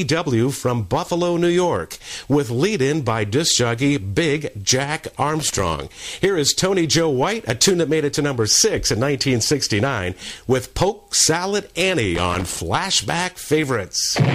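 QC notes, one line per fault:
5.40–5.63 s and 12.15–12.59 s, loose connector crackle: a worn contact makes and breaks, chopping the sound into irregular scratchy bursts lasting 0.24 s and 0.44 s. The waveform shows jagged dropouts and sharp spikes, and the spectrogram shows scattered broadband vertical streaks.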